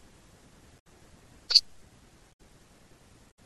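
Damaged data in a compressed stream breaks the speech at 0.76–0.87 s, 2.32–2.40 s and 3.30–3.38 s. Corrupted bytes leave the decoder misreading frames and losing sync until it finds the next valid header, producing short garbled chirps or blips.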